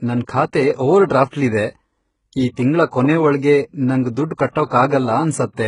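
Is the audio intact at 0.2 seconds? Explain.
No. At 0.2 s the speech carries the heavy damage that runs through the whole clip, likely from HE-AAC compression. Treble is rebuilt from copied lower bands, so s sounds turn gritty and lispy. Nothing reaches above 11 kHz, which fits a bitrate around 12 kbps.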